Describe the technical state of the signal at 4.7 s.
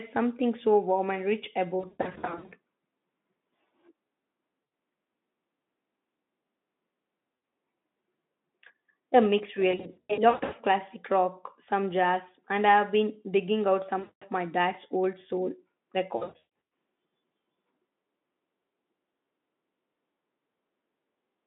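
At 4.7 s there is VoIP packet loss concealed by the speech codec, from 4.63 to 4.71 s. About 80 ms of speech is missing, which fits four lost 20 ms frames. The decoder fills the gap by extending its last pitch and filter at falling gain. The sound becomes a brief buzzy or noisy, fading smear in the narrowband Speex audio.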